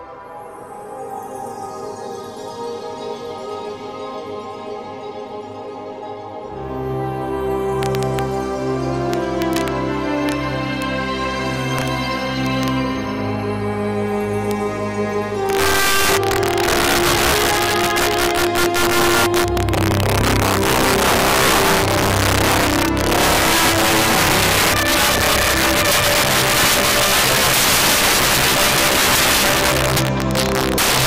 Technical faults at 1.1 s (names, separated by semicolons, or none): integer overflow